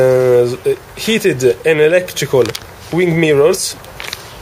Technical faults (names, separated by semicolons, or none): none